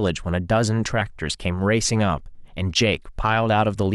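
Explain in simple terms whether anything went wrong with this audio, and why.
A brief glitchy blip cuts into the speech at 1.0 s. That's damaged data in a compressed stream: a corrupted patch the decoder briefly misread.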